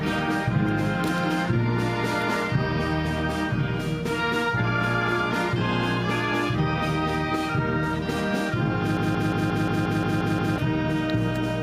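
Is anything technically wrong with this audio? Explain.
Yes. From 8.97 to 10.58 s a broken-record loop plays: a 177 ms fragment repeats nine times, likely from a stalled player resending its last buffer, and the waveform shows identical, evenly spaced blocks.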